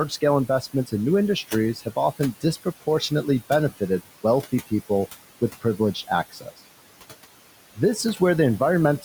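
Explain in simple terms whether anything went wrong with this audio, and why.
Between phrases the background noise drops away, then creeps back in underneath whenever the talking resumes. These are noise suppressor artifacts. A processing stage is listening for steady background noise and turning it down moment by moment. It pulls the noise of the room down hard. The room sound itself is ordinary and sits well below the talking.

In five places the speech itself goes faint or sounds swallowed for a fraction of a second. This is speech cut by the noise suppressor. It happens from 0.47 to 0.93 s, just before "in new", and again from 1.75 to 1.97 s, right after "in new". It also happens from 2.19 to 3.25 s, from 5.61 to 6.1 s just after "wealthy people with", and from 6.31 to 6.59 s. The suppressor mistook soft, quiet parts of the speech for background noise and turned them down along with it.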